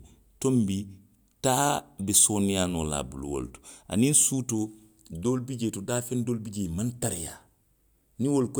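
Speech recording, no technical faults detected on listening.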